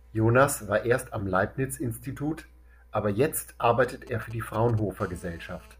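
GSM signalling bursts, 3.84 to 4.80 s, interrupt this speech: a galloping dit-dit-dit of short 217 Hz buzzes, around 20 dB below the voice, as a nearby 2G phone's signalling radio pulses get rectified in the audio circuit. GSM phone buzz follows from 5.00 to 5.75 s, a steady, raspy 217 Hz drone rich in harmonics, about 28 dB down, from the same kind of phone transmitting in bursts 217 times a second during a call.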